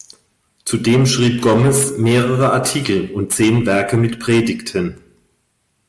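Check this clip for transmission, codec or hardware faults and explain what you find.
Aliasing runs through the whole clip. The halving of the sample rate points to 48 kHz being cut to 24 kHz without a low-pass filter. Content above 12 kHz folds back down, sitting roughly 15 dB under the speech and making sibilants gritty and metallic.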